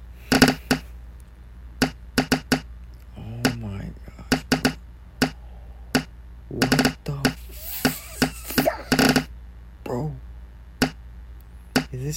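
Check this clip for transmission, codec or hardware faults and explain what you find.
There's one hardware fault here: a mains buzz running through the whole clip. It sits somewhere around 35 dB below the main sound, so it's low but never goes away. It's built on 50 Hz. Something like a dimmer, a rectifier or an unshielded run is letting sharp switching spikes into the line twice per mains cycle. Those spikes carry a stack of 50 Hz harmonics up into the several-kHz range, which is why you hear a steady, raspy buzz rather than a clean low hum.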